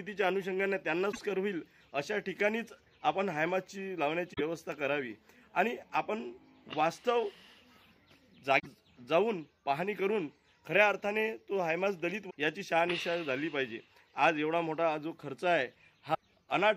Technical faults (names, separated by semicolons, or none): damaged data in a compressed stream